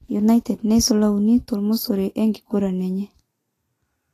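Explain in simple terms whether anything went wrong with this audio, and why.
Throughout the speech, the treble sounds hissy and grainy and stops at 14.2 kHz, likely from Vorbis compression turning fine detail into noise to save space.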